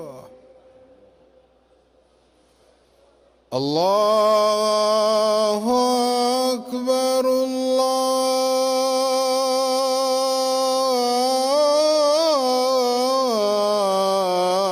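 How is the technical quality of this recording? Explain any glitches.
The technical quality of this recording holds up, and there are no glitches to explain.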